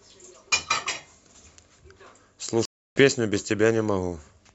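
At 2.65 s the connection dropped, so the player went silent, reconnected and started a new decoder mid-stream: a stream reconnect. The speech cuts out for about 0.31 s and resumes near 3.01 s roughly a fifth of a second further on, skipping material.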